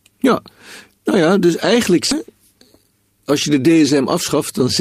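A skip ahead occurs at 2.11 to 2.13 s, just after "nou ja dus eigenlijk". Roughly 0.4 s of speech was discarded while later audio was already queued, and playback leaps forward with no silence in between. The two sides of the cut butt together abruptly.

A jitter buffer speed-up runs from 4.02 to 4.63 s. Because the buffer held more audio than it needed, the receiver repeatedly trimmed short pitch-period slices, about 40 ms in total. The speech plays at 105% pace and sounds slightly hurried, while its pitch stays unchanged.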